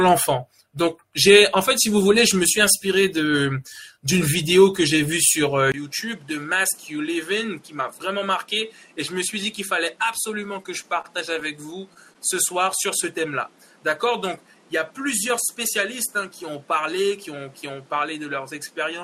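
At 5.72 s the sound drops out for a brief 20 ms silence. It then comes back noticeably quieter, by about 10 dB, and duller for the rest of the clip, passing a narrower band. A new background noise also appears, sitting roughly 30 dB below the signal. Together these changes in band, tone, level and noise point to an input switched to a poorer device, likely another microphone taking over mid-recording.

Between 10.63 and 12.17 s, on top of that duller sound, there are scattered short gaps: about seven brief hiccups and smeared ticks spread across the stretch, the longest around 30 ms. Each comes from a lost or late packet that the receiver covered by stretching the preceding sound forward. The patches add up to roughly a tenth of a second, a small share of that span.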